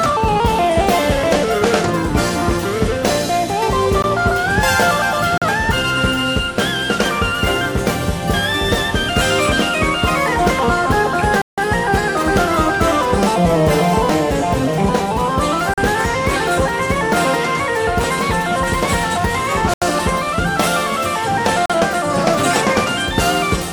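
At 4.02 s there's a block of digital silence: the audio drops straight to silence for about 16.5 ms and snaps back. It happens again at 5.38 s (40 ms), 11.42 s (160 ms, a real hole), 15.74 s (40 ms), 19.74 s (80 ms) and 21.66 s (40 ms). After the first, the lengths come in 40 ms steps, which points to whole output buffers not being filled in time.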